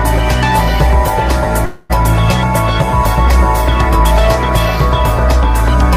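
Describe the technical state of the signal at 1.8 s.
At 1.8 s the signal sits inside a long network dropout from 1.65 to 1.91 s, likely a stall in arriving packets. About 240 ms is filled by a fading buzzy continuation of the preceding sound.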